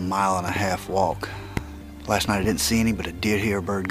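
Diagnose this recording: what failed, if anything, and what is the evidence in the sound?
Three loud pop events sit on top of the sound. The first, from 0.48 to 0.58 s, is a double pop. Two more single pops follow, at 1.57 to 1.59 s and at 2.44 to 2.47 s. The first two peak about 15 dB above the surrounding audio, and the last about 10 dB. The sound continues underneath each one. The stage is likely the analogue wiring, with a voltage step or pulse from a plug, switch or static discharge that was shaped into a sharp pop.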